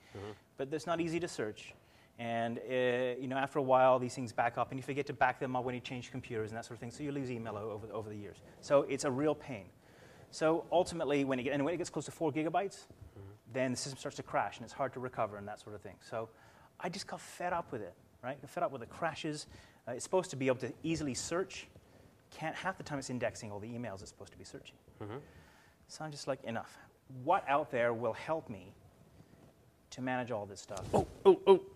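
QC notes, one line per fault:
No technical faults were found anywhere in the signal.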